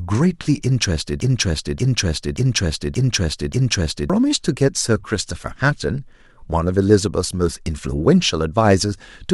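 The playback or streaming chain in this speech clip likely stalled and kept resending the last buffered fragment, producing a broken-record loop from 1.20 s to 4.10 s. A 580 ms slice of speech plays five times back to back, each repeat identical, so the same syllables stutter mechanically for nearly three seconds. Whatever speech belonged in that stretch never arrives; when the loop releases, the audio jumps ahead with that span missing.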